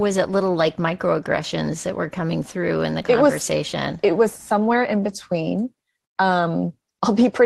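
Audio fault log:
3.01 to 3.05 s, short concealed packet loss: about 20 ms of audio arrived too late for the decoder, so the receiver extended the preceding sound and then blended back into the real signal. The result is a brief smear rather than a rougher patch, because the filler is an extrapolation and none of the original content survives.
5.03 to 5.09 s, lost packet rebuilt from error correction: two packets went missing, but the packets that followed them carried low-bitrate copies, and those copies rebuilt 40 ms of audio. There is no gap. The stretch sounds grainier and noisier than the surrounding Opus-coded sound, which is what separates it from concealment. Concealment guesses the missing audio, while this fault plays degraded copies of the real audio.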